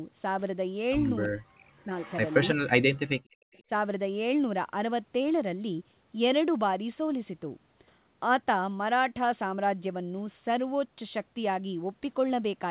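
Right at 1.23 to 1.27 s there's a faint echo leak, a copy of the talk arriving about 337 ms late, most likely from a loudspeaker at the far end whose echo canceller let some through. It comes back at 2.0 to 2.55 s, loudest there at about 20 dB under the main signal, and again at 3.53 to 3.63 s, very faint. Straight after, the speech gets suppressed in double talk at 1.27 to 1.92, 2.54 to 2.6, 2.8 to 3.26 and 3.63 to 3.7 s. The canceller likely couldn't tell the talker from the echo, so it ducked both. You hear the speech plunge, by roughly 40 dB at worst and less in the last dip, breaking into pieces.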